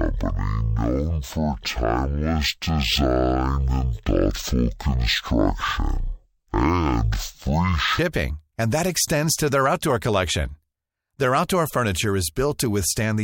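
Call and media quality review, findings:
Stereo read as mono, 0.0–7.99 s, ending before "and that extends to". Probable fault in decoder or channel-format handling: interleaved left/right samples consumed as one channel. Speech at 0.5× speed, pitched 12 semitones (one octave) low, with a faint mirrored image in the upper spectrum.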